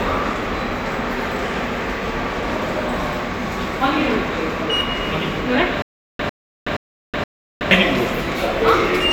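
From 5.82 to 7.71 s, stutter with silent gaps: a 101 ms burst repeats four times with about 370 ms of digital silence between, likely a stalled stream retrying, unlike a single dropout.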